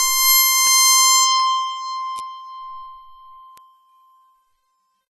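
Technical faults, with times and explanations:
Throughout: AAC compression, likely at a low bitrate of around 32 kbps. The music has nothing above 13.8 kHz, so the top end sounds dull and closed in. The encoder splits each frame into frequency lines and spends few bits on them. Weak bands are dropped or filled with substitute noise. That leaves gaps and smearing in the spectrum. Sustained parts pick up a plainly audible warbling, fizzy texture.
0.67 s, 1.40 s, 2.19 s and 3.58 s: bit error spike. Each is one sharp, isolated tick. A single bit flipped in storage or on a digital link, so the sample value jumped by a power of two and then came straight back. The jump spans only one or two samples, so the click is broadband and very short. It has no link to the music around it.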